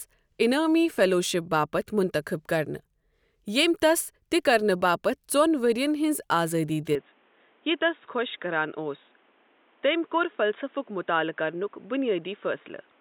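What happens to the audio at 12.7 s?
At 12.7 s the speech sounds dull and boxy, with nothing above 3.8 kHz, a little quieter, and carrying a faint new noise floor. That holds from 6.95 s, right after "ژون ورِین ہنز آزٲدی", to the end, with no gap at the change. The likely cause is an input switched to a poorer device in mid-recording.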